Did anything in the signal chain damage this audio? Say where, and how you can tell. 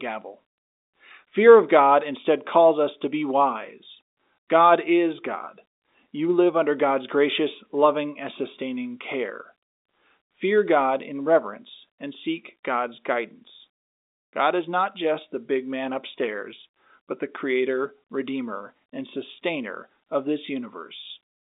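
No, nothing in the signal chain damaged this audio.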